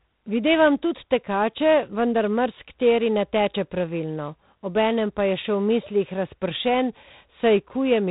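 A harsh, rasping hiss rides on the speech from start to finish, rising and falling with the level of the voice, and nothing above 4 kHz comes through, so the sound is dull and telephone-narrow. This is plainly audible G.726 ADPCM damage. The codec sends only a few bits per sample describing how far each sample strays from a running prediction, and the coarseness here fits its 24 kbit/s mode, leaving level-tracking quantisation noise.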